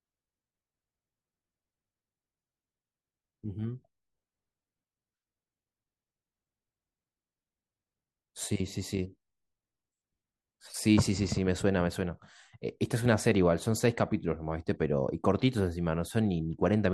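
No technical faults can be heard anywhere in this speech recording.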